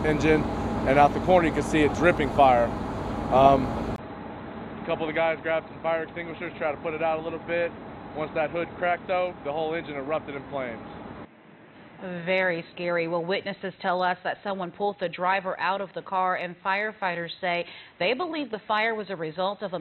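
At 3.96 s the sound drops out for about 20 ms, then returns roughly 10 dB quieter, dull and boxy, with nothing above 4 kHz and a faint new hiss. This is likely an input switched to a poorer device. The spectrogram's upper band empties abruptly there, and the waveform visibly shrinks.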